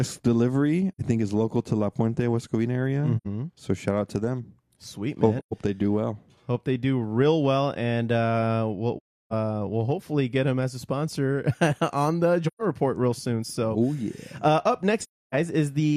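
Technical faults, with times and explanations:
0.92–1.01, 3.17–3.27, 5.39–5.53, 8.97–9.33, 12.47–12.62 and 15.01–15.35 s, AAC frame loss with muting: the sound fades into brief silent holes with soft edges. The shortest gaps last about 85 ms, and the longest last about 340 ms at 8.97 s and 300 ms at 15.01 s. Whole blocks of coded audio went missing, and the decoder filled them with silence. The overlapping transform windows taper the sound down into each gap and back up out of it.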